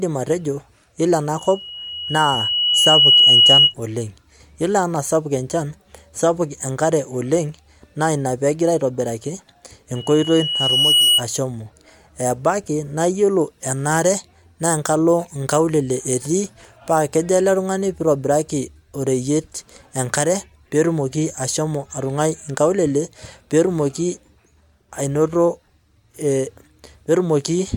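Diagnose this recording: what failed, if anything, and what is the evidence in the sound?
Loudspeaker feedback squeal at the analogue microphone-to-speaker loop: gain exceeds one at 2.9 kHz, so a tone swells over roughly 1.5 s at 1.38–3.74 s (before "oleng yiolo") and roughly a second at 9.95–11.22 s, showing as a bright horizontal spectrogram line.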